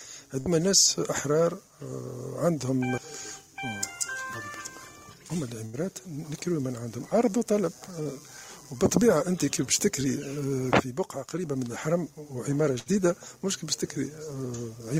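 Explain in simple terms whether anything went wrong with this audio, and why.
Three times the connection dropped a short run of audio data in a row, a burst of packet loss, at 0.39 to 0.48 s, 5.66 to 5.75 s and 12.79 to 12.88 s. Each time, the receiver covered the hole by stretching out the last sound it had and letting it fade, for about 60 to 75 ms. You hear a brief held buzz or fading hiss. The sound then picks up slightly further along, with 60 to 80 ms of the original simply gone.

At 8.03 to 8.07 s, a much smaller piece of data arrived too late to play, a short concealed packet loss. The receiver patched the 20 ms gap by carrying on the sound just before it and blending back into the real audio afterwards. It is so short that it comes across as a quick smear or wobble rather than a dropout.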